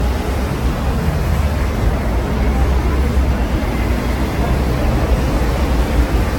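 Throughout, generation loss makes the sound swirly, hollow and smeared, with blurred attacks. It likely comes from about seven lossy re-encodes near 65 kbit/s. A spectrogram shows patchy holes and nothing above 17.3 kHz.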